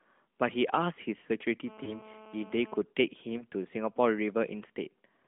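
From 1.67 to 2.82 s a GSM phone buzz sits about 21 dB below the speech: a nearby 2G handset in a call, its radio bursts rectified by the audio circuitry, giving a steady, hard, raspy 217 Hz tone rich in harmonics that ignores the speech.

Inside that stretch, between 1.84 and 1.95 s, comes the first of two lost AMR speech frames; the second falls between 3.38 and 3.44 s. Each sounds like a single 20 ms frame failing its checksum. The decoder repeats the previous pitch and vocal tract settings at reduced gain, producing a short dip or warble before normal speech resumes.

Throughout, the AMR narrowband mobile codec's 200 Hz to 3.5 kHz band and light coding texture are audible, which fits the 12.2 kbps mode.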